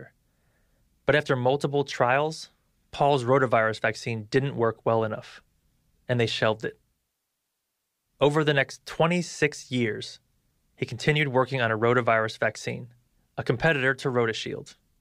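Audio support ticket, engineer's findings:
Listened through the whole speech recording and found nothing wrong, so no findings to log on this ticket.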